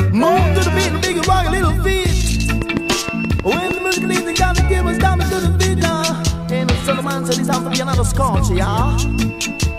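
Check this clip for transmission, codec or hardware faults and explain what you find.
One fault is present, a train of clicks. From 2.62 to 3.72 s, likely interference or a faulty connection injects regular pulses, 6.4 per second, giving about seven similar ticks that stand out roughly 10 dB above the sound.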